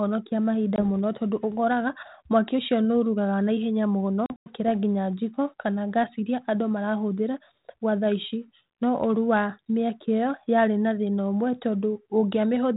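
A speech clip with packet loss on an ADPCM call. At 0.76 s a single 20 ms gap is heard, and from 4.26 s to 4.55 s about 140 ms goes missing in scattered holes, the longest run 100 ms. The waveform shows flat, hard-edged silences, and the spectrogram shows blank vertical stripes. After each hole the mismatched predictor makes the speech return slightly distorted before it settles. The telephone band, consistent with 32 kbit/s G.726, carries light coding hiss.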